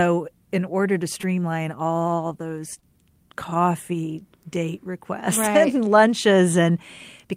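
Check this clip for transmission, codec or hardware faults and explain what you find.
There's one fault here, short concealed packet loss, hitting three times: 1.21 to 1.25 s, then a close pair at 2.74 to 2.78 s and 2.80 to 2.84 s. Each gap fits a single lost 20 ms packet that the receiver patched by extending the preceding speech before blending back. You hear brief smears or wobbles.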